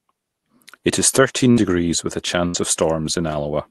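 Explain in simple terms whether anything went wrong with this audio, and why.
Two short dropouts from a burst of packet loss. The first comes right after "is thirteen", at about 1.51 to 1.60 s, and the second right after "with a", at about 2.47 to 2.57 s. Each time a few pieces of the call's audio never arrived in time, so the receiving end stretched the last bit of sound for around 60 to 70 ms, fading it out, then jumped ahead. Roughly 60 ms of real speech is simply gone at each spot.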